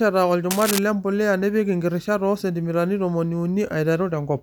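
Cable scratch noise runs from 0.51 to 0.79 s as a dense, uneven scratching and rustling that sits only a little below the speech. It likely comes from a worn cable or connector being moved, its contact resistance jumping erratically and injecting noise bursts.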